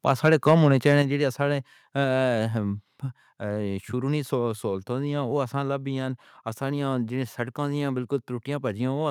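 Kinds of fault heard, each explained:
Microphone overload: From about 0.08 to 0.54 s the loudest syllables turn harsh and crackly, with the peaks flattened instead of rounded. That points to the input level being set too hot, likely driving the converter roughly 4 dB past its ceiling so the tops of the waveform get sheared off. It isn't constant. Only a small slice of the sound, around one percent, actually hits the limit, which is why you hear gritty bursts on the peaks rather than steady distortion.
Microphone volume stepped down: At about 1.02 s everything drops in level at once, speech and background together, by about 5 dB, right before "جِتنے سارے". It's a single step, not a gradual fade, which is the giveaway of the call software likely reacting to the earlier overload by pulling the device's input gain down in one go. Coming half a second after the distorted stretch, the drop reads as a correction to that clipping.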